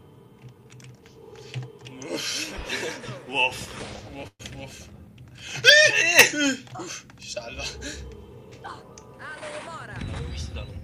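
A call audio freeze interrupts the sound from 4.27 to 4.41 s: the last sound is stretched into a fading buzz ending in near-silence, then resumes intact about 121 ms late, likely from delayed packets draining the jitter buffer. On a spectrogram this looks like smeared, decaying bands before a brief blank column.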